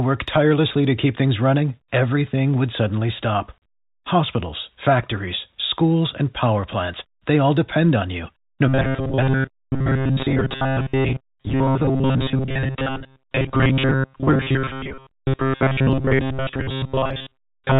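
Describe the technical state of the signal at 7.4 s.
At 7.4 s the speech is intact, with nothing breaking into it beyond the narrow telephone band of the G.711 coding it passes through.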